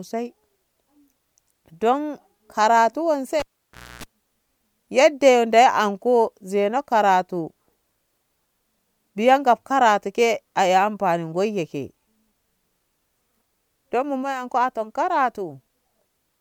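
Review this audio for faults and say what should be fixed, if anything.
At 3.40 s there's a classic cable pulled and plugged in: a pop, about 590 ms of near silence, within which roughly 276 ms of 60 Hz mains buzz comes through as the tip scrapes in, and a second pop by 4.04 s when the speech comes back. Lock the connectors down, and mute the channel before touching any cable while it's live.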